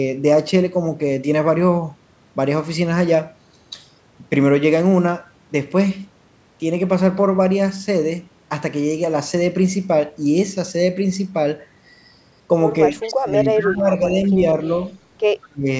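From 12.89 to 13.39 s, 13.56 to 14.35 s and 15.47 to 15.67 s, the speech dips by about 20 dB, and by about 35 dB at the end. This is likely speech suppressed in double talk, with the echo canceller ducking its own talker along with the loudspeaker echo. Faint echo leak appears at 13.01 to 13.11 s, 13.42 to 13.47 s and 15.42 to 15.48 s. It is a delayed copy 202 ms late, about 25 to 30 dB down, likely loudspeaker echo the canceller missed.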